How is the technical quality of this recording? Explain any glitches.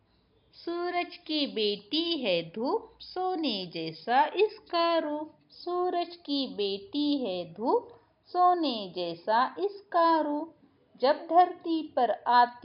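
No audible glitches or faults.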